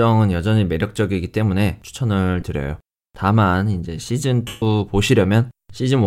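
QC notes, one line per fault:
2.41 s and 4.47 to 4.62 s, lost LE Audio frames: the decoder refills each gap with the previous spectrum under random signs. The brief 15 ms dropout smears, and the 150 ms gap fades toward silence. The durations fit 7.5 ms frames.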